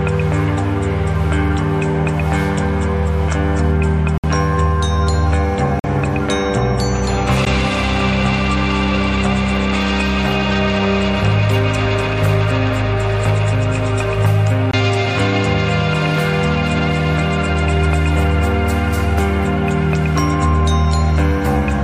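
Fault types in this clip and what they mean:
Bluetooth stall: four cuts to full silence, at 4.18, 5.80, 7.45 and 14.71 s, lasting 59, 46, 14 and 21 ms, likely from the headphone buffer running dry while delayed packets were resent. Unlike concealed packet loss, nothing fills the gap; playback halts, then resumes.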